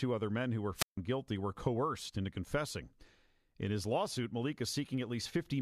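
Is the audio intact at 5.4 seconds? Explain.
No, 5.4 s falls inside a run of clock drift buffer slips that lasts from 1.25 to 5.46 s. The speech picks up a click about every 1.41 s, four or so in all. That's likely two devices on separate clocks, off by something like 150 ppm, so the buffer between them slowly drifts until a handful of samples, around seven, gets dropped or repeated. Each jump leaves a discontinuity you hear as a tick.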